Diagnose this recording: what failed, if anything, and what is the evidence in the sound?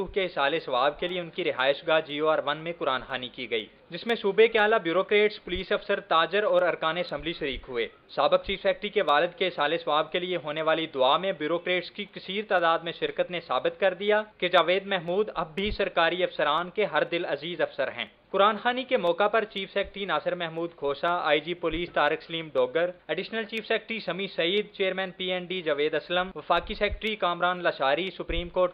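A regular tick runs through the audio every 0.5 s, from 0.09 s to 28.57 s, and is heard only where there is signal. These are periodic USB or driver dropouts at the driver or buffer stage. At each tick, only a fraction of a millisecond of audio goes missing and the stream simply skips ahead with no silence filled in. That small jump in the waveform makes the click. The strict half-second spacing points to a background task that blocks the USB bus or audio driver on a fixed schedule.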